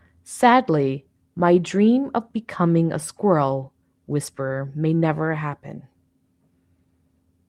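No technical faults can be heard anywhere here.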